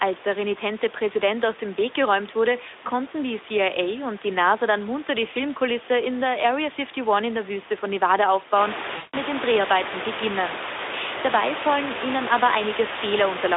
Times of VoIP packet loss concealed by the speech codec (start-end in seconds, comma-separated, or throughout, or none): 8.97-9.16